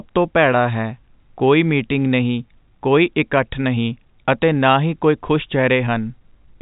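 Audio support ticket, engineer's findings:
No faults found in the speech. G.711 telephone coding path working as expected: band-limited, nothing heard above about 3.8 kHz, coding noise faint at most.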